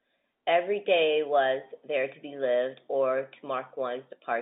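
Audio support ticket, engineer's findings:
No faults found; speech carried over G.711 telephone coding with the expected 200 Hz to 3.7 kHz line band and nothing above 3.8 kHz.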